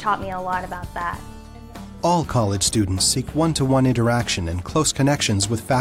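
Nothing here needs flagging, since the audio runs without any technical problem worth pointing out.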